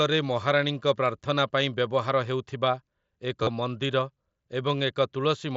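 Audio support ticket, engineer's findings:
Brief buzzy, held tone at 3.43–3.47 s, about 40 ms long, full level, with a slight warble as normal speech resumes. Component: Bluetooth headset link. Concealed Bluetooth headset packet loss. A short run of voice packets never arrived, which fits roughly five consecutive mSBC frames. The receiver filled the gap by repeating the closest-matching slice of recent waveform, hence the tonal buzz. Wideband mSBC path audible, band-limited to 8 kHz, light grain only.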